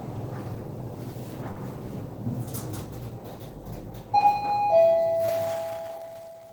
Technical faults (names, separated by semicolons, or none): short concealed packet loss